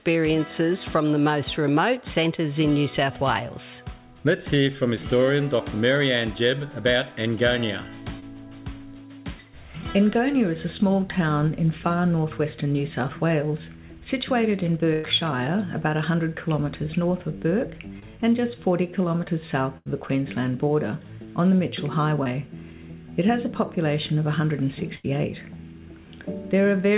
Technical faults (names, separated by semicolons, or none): short concealed packet loss; burst of packet loss